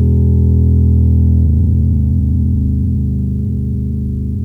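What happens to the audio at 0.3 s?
Nothing goes wrong at 0.3 s; the music plays through that moment intact, with no dropout, click or other fault.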